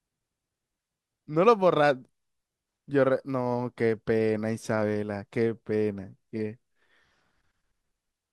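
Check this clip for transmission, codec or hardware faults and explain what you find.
No faults turn up in the check of this clip.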